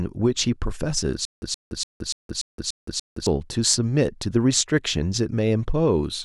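From 1.25 s to 3.27 s the speech breaks into a stutter with silent gaps. A 122 ms fragment plays, then about 169 ms of digital silence, and the cycle repeats seven times at a steady 291 ms period, giving a mechanical stammer. The likely cause is a stalled player or stream replaying its last buffered fragment on each retry before running dry. The audio that belonged in that span never plays.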